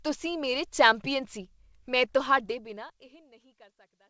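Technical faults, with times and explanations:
No faults found: the smooth fade-out from about 2.5 s to the end is deliberate, and the WebRTC call path leaves nothing above 8 kHz, as that path is expected to.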